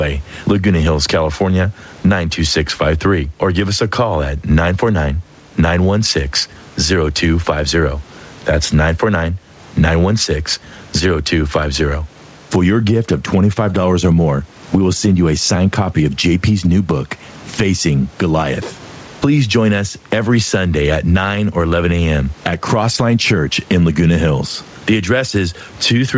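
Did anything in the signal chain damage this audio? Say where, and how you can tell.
Yes: gain pumping, throughout, at the capture and call-processing stage. The gain swings by around 15 dB, likely from excessive input gain with a fast limiter clamping it. A noise gate would instead silence the pauses.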